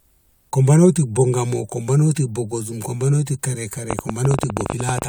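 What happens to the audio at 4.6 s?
At 4.6 s the speech sits under a train of clicks: sharp, similar-sounding pops at an uneven pace of about 16 per second, roughly twenty in all between 3.91 s and 5.03 s, standing well above the speech and carrying on through the gaps. Such an uneven run of similar pulses likely comes from electrical interference from nearby equipment or a faulty connection or power supply.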